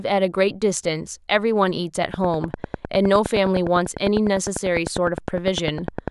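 A speech recording with a train of clicks running from 2.14 s right through to 6.09 s, about ten clicks per second at a steady, even spacing, so you get roughly forty near-identical ticks. They sit well above the speech, peaking around 15 dB over it, and keep going through the pauses too. That regular, repeating pulse is most likely interference from nearby equipment or a faulty connection or power supply.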